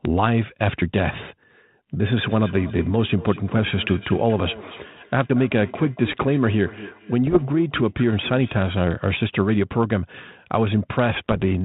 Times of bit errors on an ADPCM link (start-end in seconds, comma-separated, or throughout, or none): 7.26-7.43, 11.24-11.45